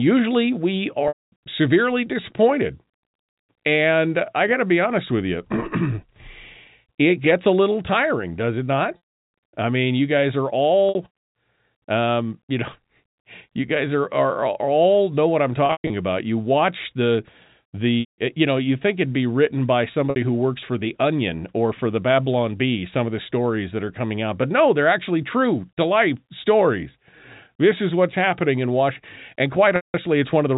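Packet loss with pitch repetition occurs seven times, at 1.08–1.32 s, 8.97–8.99 s, 10.89–10.95 s, 15.66–15.90 s, 18.00–18.18 s, 20.10–20.16 s and 29.76–29.94 s. The receiver fills each gap by repeating the last pitch period. The 60 ms gaps, including the one between "tiring does it not" and "I mean you guys", sound like a briefly held, buzzy tone. The 180–240 ms gaps, such as the one before "severely disappointed" and the scattered one after "all know what I'm" with a longest run of 120 ms, fade to silence before the sound returns. The telephone-band G.711 coding keeps everything below 4 kHz.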